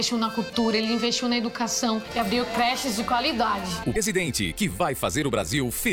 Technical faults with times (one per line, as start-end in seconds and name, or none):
0.92-5.57 word clock ticks
3.93-3.97 damaged data in a compressed stream